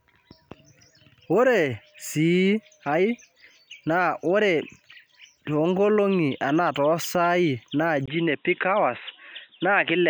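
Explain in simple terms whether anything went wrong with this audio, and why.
At 8.06 s the input likely switched to a poorer device. After a tiny gap, the speech turns dull and boxy until the end.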